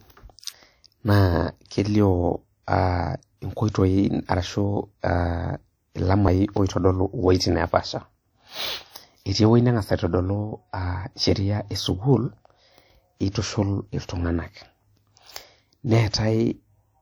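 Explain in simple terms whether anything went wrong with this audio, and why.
Something did go wrong, and it lasts from start to end. The speech has a ringing, washy quality. A hiss rises and falls along with the speaking. This points to WMA compression as the likely cause. That kind of codec squeezes the sound into small chunks to save space. It cannot store every detail exactly. Small errors get smeared across each chunk, and quiet details are thrown away. Here the damage is plainly audible.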